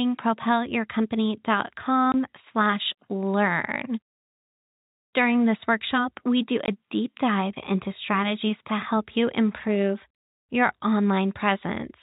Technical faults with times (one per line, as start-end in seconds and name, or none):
2.12-2.14 packet loss filled with silence
6.66 packet loss filled with silence